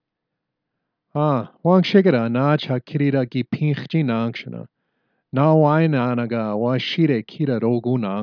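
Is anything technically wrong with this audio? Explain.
No, nothing technically wrong stood out on listening to this speech recording.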